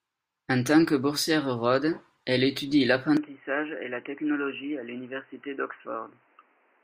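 Right after "elle étudie", at about 3.17 s, the speech abruptly goes dull and boxy, with nothing above 3 kHz, a bit quieter, and a faint new background noise underneath, and it stays that way to the end. That's likely the input switched to a poorer device.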